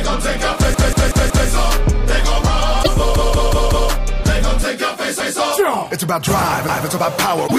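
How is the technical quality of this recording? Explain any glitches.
The recording has two recurring faults: stutters from a repeated buffer and brief glitches from damaged data in a compressed stream.

A block of about 186 ms plays five times in a row with hard joins from 0.74 to 1.49 s and again from 3.16 to 3.90 s, and twice from 5.20 to 5.39 s and from 6.69 to 6.87 s. New audio arrived late, so the device replayed its last buffer, which fits an 8192-sample buffer. No audio appears to be lost.

Short glitches occur from 2.80 to 2.88 s and from 7.44 to 7.52 s. Bad bytes in the compressed stream made the decoder misread frames and lose sync until it found the next valid frame header.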